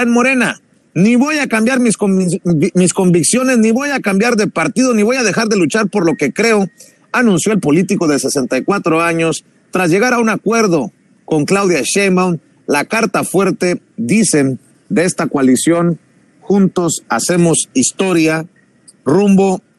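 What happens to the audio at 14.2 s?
At 14.2 s, as throughout, the sound is likely suffering MP2 compression at a low rate, consistent with about 80 kbps, where upper sub-bands switch off and the rest are coarsely quantised, leaving a dull, gurgling, granular texture.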